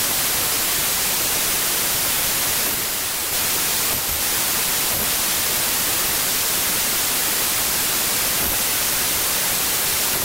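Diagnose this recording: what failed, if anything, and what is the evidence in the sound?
Wrong sample width throughout, a sample-format conversion fault: the speech sits under loud noise at 0.75 speed and lower pitch, which fits 32-bit samples misread as packed 24-bit.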